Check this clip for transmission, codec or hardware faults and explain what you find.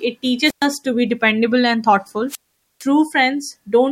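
Two wireless microphone squelch dropouts break up the speech, from 0.41 to 0.68 s and from 2.28 to 2.85 s. In each, the FM radio link weakens until the receiver's squelch decides there's no usable carrier and mutes the output. You get a quick swell of hiss, then a gap of near silence, about 0.12 s in the first and a much longer 0.46 s in the second, before the voice returns.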